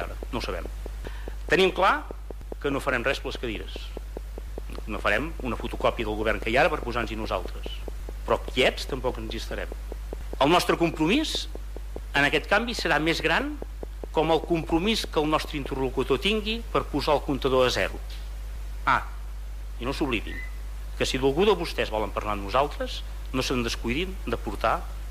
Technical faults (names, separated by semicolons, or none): train of clicks